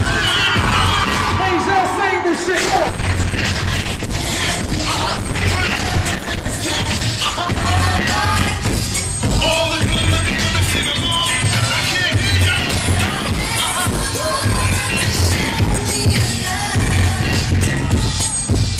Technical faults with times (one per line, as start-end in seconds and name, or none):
2.37-7.69 call bitrate drop